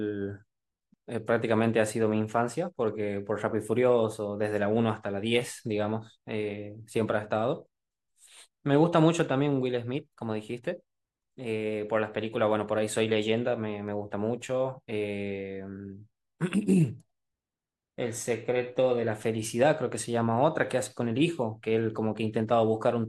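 No technical faults can be heard anywhere in this recording.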